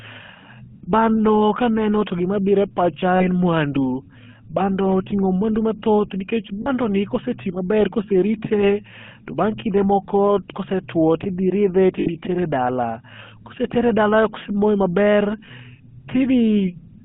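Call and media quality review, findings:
GSM full-rate codec throughout: buzzy, gravelly speech and a band of about 150 Hz to 3.4 kHz, consistent with 13 kbps full-rate coding.

Lost GSM frames: metallic held ring at 3.16 s (40 ms), 6.62 s after "oting'o muandu mathoth nikech" (40 ms), 12.0 s before "dala kosetere dala kosemoe" (60 ms), and 15.46 s after "kosetere dala kosemoe maber" (20 ms). Last good frame repeated.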